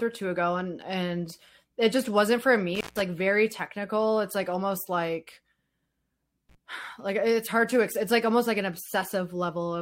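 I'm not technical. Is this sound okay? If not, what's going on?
No. The speech has an intermittent contact fault: a loose cable or plug briefly loses connection, so the sound drops out with a crackle at each edge. It happens at 2.75 s, cutting out for about 150 ms, and again at 6.49 s for about 34 ms.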